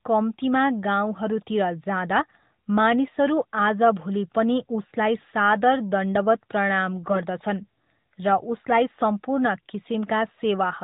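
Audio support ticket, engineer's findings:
AMR bit errors, 7.06 to 7.22 s. Speech turns hoarse and gargly for about 0.16 s while pitch and level roughly hold. Probable component: radio link into the AMR decoder. A few percent of the less protected bits flipped, checksum still passed. Misplaced excitation pulses, wrong fine gain and spectrum values. Over a handful of 20 ms frames. Surrounding audio band-limited to 4 kHz, narrowband AMR character consistent with the 12.2 kbps mode.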